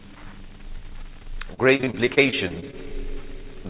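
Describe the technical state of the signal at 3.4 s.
At 3.4 s the signal is intact, with no dropout, glitch or distortion, only the narrowband sound of the call path, which points to a G.711-style codec and leaves nothing above 4 kHz.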